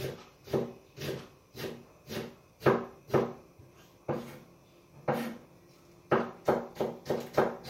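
No technical faults are audible.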